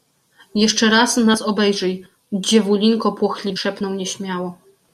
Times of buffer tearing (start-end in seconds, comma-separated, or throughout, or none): none